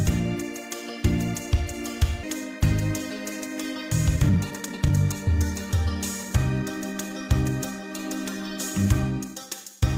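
At 2.23 s the audio lurches forward with no gap at all, as if about a second of material had simply vanished and the sound on either side were butted together. This is a skip ahead: a stretch of audio was dropped, either lost in transit or discarded when the jitter buffer overflowed, while newer audio was already queued. Playback resumed from that later point, cutting the delay by roughly a second.

From 3.82 to 6.31 s the sound runs noticeably hurried, at about 119% of normal speed, yet the pitch stays where it was. This is a jitter buffer speed-up. The buffer had built up more audio than its target, so the receiver trimmed out short pitch-period-length pieces again and again, removing around half a second in total. A milder pass of the same process follows from 9.28 to 9.67 s, at about 111% speed, shaving off only a few tens of milliseconds.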